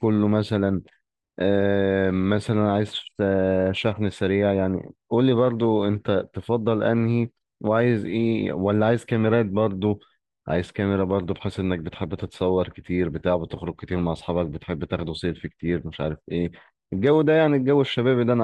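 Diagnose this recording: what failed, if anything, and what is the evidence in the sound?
Nothing in the sound of this speech recording stood out on listening as a sign that any stage of the chain failed.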